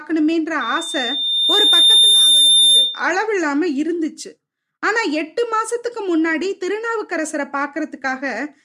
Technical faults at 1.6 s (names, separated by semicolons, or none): loudspeaker feedback squeal